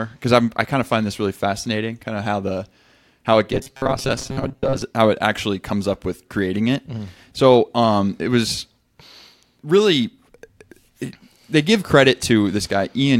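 From 3.53 to 4.82 s, audio likely arrived too seldom; repeated short buffers replaced about half of it, producing robotic sound: a metallic 134 Hz buzz.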